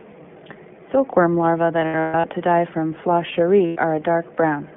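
The whole recording has passed through the iLBC codec, a narrowband VoIP coder that handles each frame on its own. Its roughness fits the 15.2 kbps mode with 20 ms frames. The line band runs from about 150 Hz to 3.4 kHz, so nothing above 3.4 kHz survives and the low end is thin. The coding damage is plainly audible: the speech comes through clear but rough and slightly synthetic.

Between 1.80 and 2.26 s, just before "to die from", packets carrying lost iLBC frames went missing. About 280 ms of audio was lost in pieces scattered over 440 ms, with the longest run around 150 ms. The decoder filled each hole by repeating the last pitch cycle mixed with noise. Those patches sound like a held, breathy, buzzy vowel, fading during the longer run. The voice returns almost immediately after each one.

A second loss at 3.66 to 3.79 s drops 100 ms, heard as a short buzzy smear.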